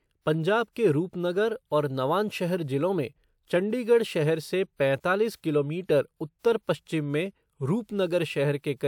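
No technical faults can be heard anywhere in the speech recording.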